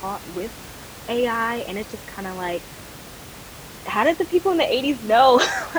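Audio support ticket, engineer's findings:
No system faults found.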